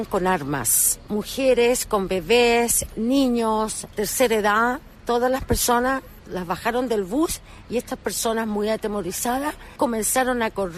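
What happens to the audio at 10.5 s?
Nothing goes wrong at 10.5 s; the audio plays through that moment intact, with no dropout, click, distortion or other fault.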